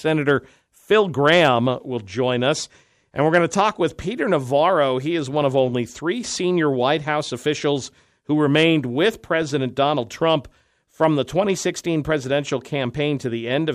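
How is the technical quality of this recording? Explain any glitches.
The speech has hard clipping in five places: briefly at 0.29 to 0.31 s, then 1.0 to 1.52 s, 3.34 to 3.61 s, 8.56 to 8.64 s, and a tick at 11.03 s. In each, the peaks ran past what the chain could pass and were sliced flat, so the harmonics from those flat tops crackle on the loudest moments. The two short ones go over by only about 1 dB; the others are pushed about 3 dB over, so they sound rougher and fuzzier.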